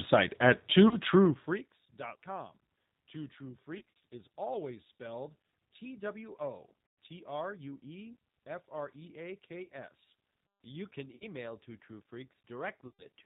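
Speech coded throughout with the G.729 codec at 8 kbit/s. It sounds rough and slightly synthetic, and a spectrogram shows nothing above 4 kHz, with a smeared, pulse-built texture in the voiced bands. VoIP packet loss concealed by the speech codec occurs at 0.88–0.97, 3.78–3.81 (just before "is always spelled"), 6.86–6.98, 9.64–9.70, 11.15–11.24 and 12.87–13.06 s. In each gap the decoder repeats its last pitch and filter, so the sound turns into a buzzy tone or coloured noise that fades. On a waveform these appear as short, sagging stretches where the periodic structure continues but the envelope shrinks. On a spectrogram they look like flat, repeated harmonic bands. The lost audio is about 30 to 150 ms per event.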